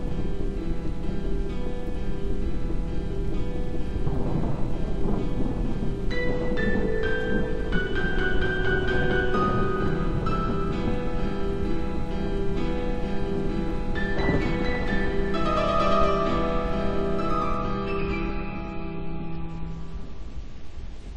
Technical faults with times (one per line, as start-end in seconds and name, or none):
17.58-21.17 adaptive stream at a lower bitrate